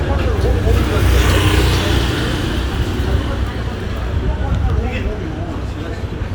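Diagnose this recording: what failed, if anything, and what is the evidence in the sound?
Nothing failed at any stage: no dropouts, clicks, distortion, level jumps or spectral damage can be heard anywhere in this recording of sounds.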